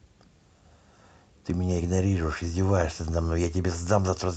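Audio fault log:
No fault in this speech clip.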